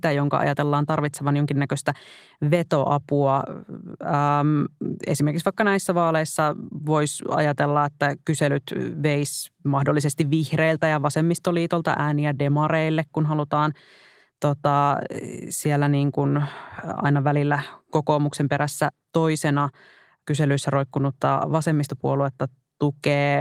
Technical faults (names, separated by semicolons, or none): none